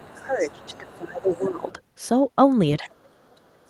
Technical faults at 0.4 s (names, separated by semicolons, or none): speech suppressed in double talk; other side's voice leaking through